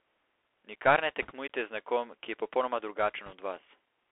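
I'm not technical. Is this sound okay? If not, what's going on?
No. The speech went through a Bluetooth CVSD headset codec, which makes it sound thin and phone-like, with scratchy s sounds and a gritty hiss rather than just muffling. There are also bit errors on a Bluetooth voice link at 1.22 to 1.31 s and 3.26 to 3.33 s, heard as brief rushing crackle, not sharp clicks.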